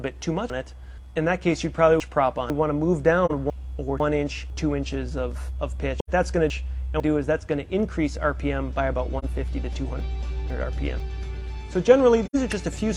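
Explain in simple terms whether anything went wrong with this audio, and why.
Chunks out of order affect 0.5–2.5 s, 3.5–4.5 s, 6.0–7.0 s and 10.0–11.0 s: half-second pieces play late and out of sequence, so the sound jumbles.

AAC frame loss with muting leaves brief, soft-edged silences at 3.25–3.31 s, 6.99 s, 9.18–9.25 s and 12.25–12.36 s. Each gap is roughly 43 or 85 ms, which fits one or two missing frames faded out.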